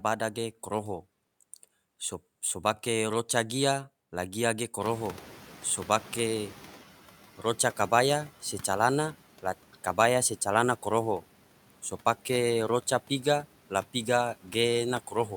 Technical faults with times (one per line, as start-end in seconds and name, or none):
4.81-6.80 noise suppressor catching up